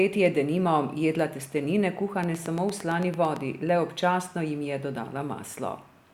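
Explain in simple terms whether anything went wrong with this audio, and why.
A train of clicks runs from about 2.24 to 3.37 seconds: roughly ten sharp ticks, evenly spaced at about nine per second, poking out above the speech. A steady repeating pulse like this is likely interference from nearby equipment or a faulty connection or power supply.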